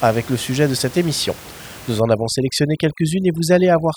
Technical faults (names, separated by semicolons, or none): overdone noise removal